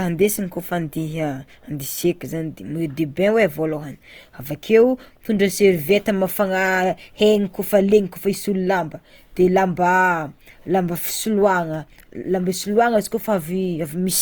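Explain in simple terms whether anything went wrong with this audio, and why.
From start to finish the speech has a rough, grainy, noisy texture, though the high end isn't dulled. The likely cause is Opus compression: short of data, the encoder patches in detail it can't afford with copied or noise-like sound, leaving that sandy edge.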